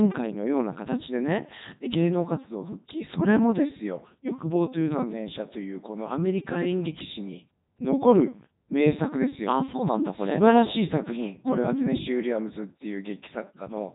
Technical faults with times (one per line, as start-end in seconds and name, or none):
0.00-13.95 Codec 2 vocoder